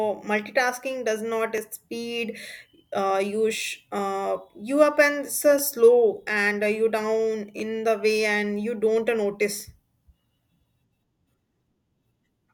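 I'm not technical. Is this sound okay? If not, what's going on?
No. There are overlapping chunks at 1.58, 3.58, 5.59 (between "you up and so" and "slow and uh you"), 7.60, 9.60 and 11.61 seconds. The recording was handled in 2-second pieces, and each new piece starts slightly before the previous one finished. That makes a tiny sliver of speech, about 6.5 milliseconds, play twice at every join. You hear it as a click or stutter every two seconds.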